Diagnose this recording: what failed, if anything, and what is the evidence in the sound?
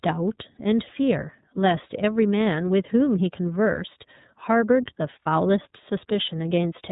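The codec stage passed the speech through iLBC, a narrowband VoIP coder, for the whole clip. Nothing above 4 kHz survives, and each frame's excitation is coded independently, leaving a plainly audible rough, synthetic edge that fits its 30 ms, 13.33 kbps mode.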